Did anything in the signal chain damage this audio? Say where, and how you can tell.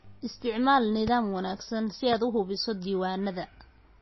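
Yes. The codec stage is the likely culprit for damage heard throughout: a heavily starved MP3 encode. Nothing remains above 5.8 kHz, which fits a low bitrate of around 24 kbps. The encoder zeroes weak frequency lines frame by frame, leaving a watery, swirly texture with smeared attacks.

Two loud pops sit on top of the speech, one at 1.08 to 1.10 s just before "wanaagsan si" and another at 2.13 to 2.15 s between "wanaagsan si" and "u habayso". Each is a single sharp click, roughly 10 dB above the signal. The likely cause is a voltage step or glitch entering the analogue wiring or driver, which the later circuitry shapes into a brief transient while the speech continues underneath.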